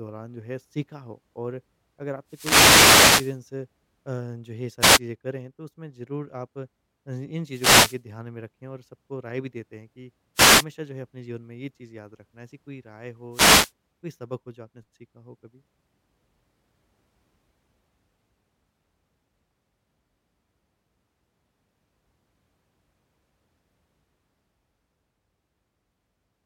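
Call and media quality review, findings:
Wireless microphone noise hits on the speech, five of them: 2.27–3.40 s (the longest, about 1.1 s), 4.80–4.99 s, 7.49–8.02 s, 10.35–10.65 s and 13.31–13.72 s. Each is a short swish or burst of static over the talker. Probable component is the analogue FM radio link, mic pack to receiver. When reflected paths cancel the carrier, it dips, receiver noise climbs and, at the bottom of a fade, breaks up into clicks that swamp the speech.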